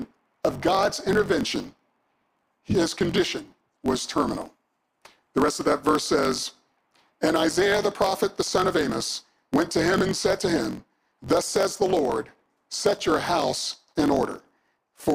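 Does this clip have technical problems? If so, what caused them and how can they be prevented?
Yes. A block size mismatch (truncated) runs throughout: a buzz at about 46.9 Hz sits under the whole clip, and the audio plays about 1.12 times too fast at roughly its normal pitch. One stage hands over longer blocks than the next reads, so each block's tail is dropped, which fits a 1024-sample read. Unlike a sample-rate error, the pitch does not rise with the speed, and unlike the padded form, it plays faster instead of gappier and slower. Prevent it by making both stages agree on one block size.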